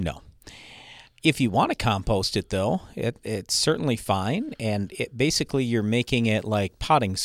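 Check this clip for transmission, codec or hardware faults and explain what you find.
One hardware fault is present. From 5.8 s to the end, just after "and it basically you're", there is video or display buzz. A screen or video cable couples into the audio path. It sounds like a low buzz at 59.94 Hz with hash above it, plus a faint 15.7 kHz line-rate whine, sitting roughly 45 dB below the speech.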